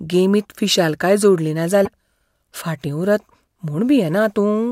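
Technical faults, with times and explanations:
1.84 to 1.88 s, broken MP3 bit reservoir: the speech jumps ahead with a brief glitch. Likely a dropped stretch of MP3 data, with frames of 26 ms, so the next frame decoded borrowed bytes that belonged to a different frame.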